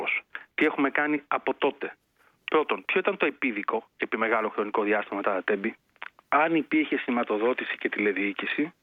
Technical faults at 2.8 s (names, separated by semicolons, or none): none